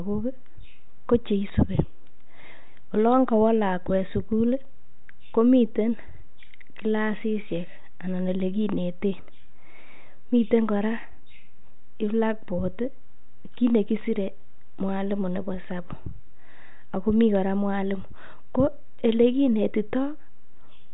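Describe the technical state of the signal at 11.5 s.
At 11.5 s the speech is intact, passing through a 40 kbit/s G.726 ADPCM telephone path whose band ends at about 3.8 kHz.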